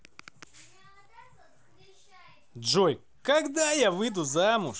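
No technical faults can be heard in this speech clip, which carries the band-limited character of a Bluetooth mSBC headset link working as intended.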